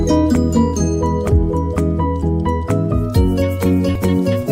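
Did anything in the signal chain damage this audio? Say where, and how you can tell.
Yes. There is damaged data in the compressed stream at the codec/storage stage. Corrupted bytes made the decoder misread frames and lose sync while hunting for the next frame header. That is heard as short blips at 1.30 s and 3.95 s.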